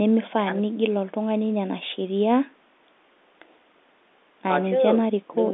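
No technical faults can be heard in the speech. It comes through G.711 telephone coding, so the sound sits within the narrow line band of roughly 250 Hz to 3.6 kHz.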